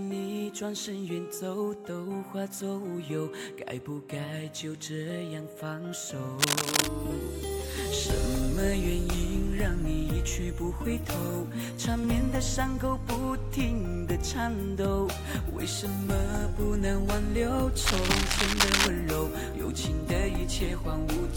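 At 6.36 s a burst of scratching noise breaks in and lasts until 6.87 s. It returns at 17.81 s and runs to 18.87 s. Both bursts are dense and uneven, about as loud as the sound itself. This is cable scratch noise. The likely cause is a worn cable, connector or control being moved. Its contact resistance then jumps about rapidly, and the signal picks up a rough, rustling crackle.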